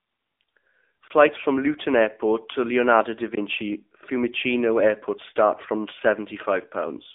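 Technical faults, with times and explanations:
Throughout: AMR narrowband mobile codec. The speech is confined to a telephone band of roughly 250 Hz to 3.6 kHz and rebuilt from a vocal-tract model at a low rate that fits 7.4 kbps, so it sounds plainly buzzy and synthetic, a steady coloration rather than the momentary damage below.
1.08 to 1.10 s and 3.35 to 3.37 s: block of digital silence. Each time a 20 ms stretch drops abruptly to silence and returns without any fade, leaving a brief hole. That is true silence, unlike the scrambled but still-present sound of bit errors.
1.34 to 1.46 s: AMR bit errors. For about 0.12 s, roughly six frames' worth, corrupted codec data misplaces the excitation pulses and skews the finer gain and spectral values, so the speech keeps its pitch and loudness but turns hoarse, scratchy and gargly instead of cutting out.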